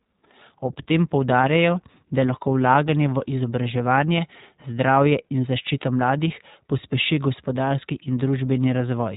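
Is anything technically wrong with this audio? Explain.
Yes. The speech carries iLBC codec damage from start to finish, and it is plainly audible. Nothing passes above about 3.8 kHz, so the speech sounds boxed-in and telephone-narrow. iLBC codes the excitation of each short frame on its own, without carrying detail over from the previous one, and here the texture suggests 20 ms frames at roughly 15 kbps. That produces a rough, slightly synthetic grain. On a spectrogram, energy stops at a hard ceiling near 3.8 kHz. The waveform looks outwardly normal.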